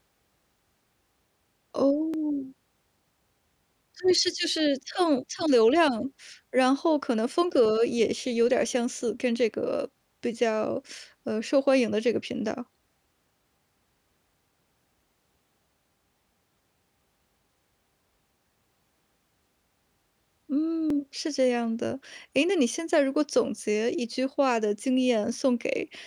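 A speech recording with a regular click every 2.68 s from 2.14 s to 23.58 s, about ten in all, each a tiny jump of some fifty samples. These are likely clock drift buffer slips from a clock mismatch of around 400 ppm. On a spectrogram they appear as evenly spaced thin vertical broadband lines, and on the waveform as small step discontinuities.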